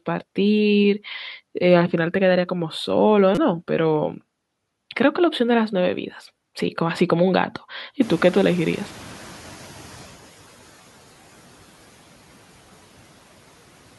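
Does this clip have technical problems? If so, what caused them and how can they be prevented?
Yes. The first fault is a repeated buffer, which occurs twice. From 3.35 to 3.37 s, new audio arrived late and the device replayed the same 5.8 ms slice four extra times, which fits a 256-sample buffer. The repeats form a short buzz near 170 Hz and replace roughly 20 ms of speech. At 9.34 s, one extra repeat gives a single click and loses a few milliseconds. On a waveform, identical chunks sit side by side with abrupt steps at each join. A spectrogram shows thin vertical streaks and, at 3.35 s, a brief comb of evenly spaced harmonics. Using a larger output buffer or giving the audio thread higher scheduling priority would prevent this.

The second fault is a noise suppressor catching up. Around 8.0 s the room noise jumps by about 25 dB, settling about 23 dB below the speech. From 8.01 to 10.26 s, the suppressor's noise estimate trails this rise, so the noise comes through with little reduction at first and then sinks by about 10 dB over 2.25 s. 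A spectrogram shows the broadband floor turning suddenly brighter at 8 s and then fading gradually. On a waveform, the gaps between syllables start out thick and slowly thin. A suppressor with faster noise-estimate tracking for sudden increases would prevent this.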